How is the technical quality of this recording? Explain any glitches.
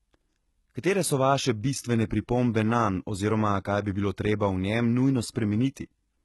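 Technical quality is poor, with heavy HE-AAC compression damage audible across the whole speech clip. The treble sounds synthetic: sibilants come out gritty and lispy, and the top end has a metallic sheen that doesn't blend with the body of the voice. The likely cause is HE-AAC coding at a very low rate, which fits roughly 16 kbps. Only the lower spectrum is actually coded, and the highs are rebuilt by copying lower bands upward under a coarse envelope, so the upper harmonics fail to line up with the real ones.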